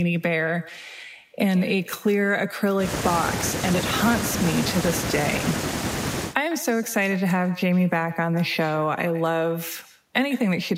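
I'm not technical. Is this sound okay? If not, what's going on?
No. Throughout the whole clip the speech has an echo with no canceller: the far end's loudspeaker is being picked up by its microphone and sent back, so every phrase is followed roughly 0.15 seconds later by a fainter, thinner copy.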